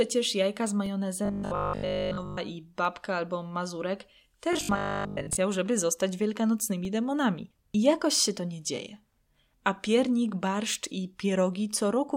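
Periodic USB or driver dropouts begin at 0.86 s, just after "jajka z". They recur every 2.0 s until 10.86 s. Each time, the driver path stalls and roughly 2 ms of audio is replaced by silence. The result is a regular tick in the speech.

From 1.25 to 2.37 s the voice turns into a stiff metallic buzz at 50 Hz. It happens again from 4.53 to 5.37 s. The likely cause is robotic sound from repeated short buffers. A 20 ms chunk keeps replaying, covering about 70 percent of the audio there.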